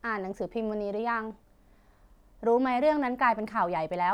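Listening closely to this speech recording, nothing stood out as a technical problem.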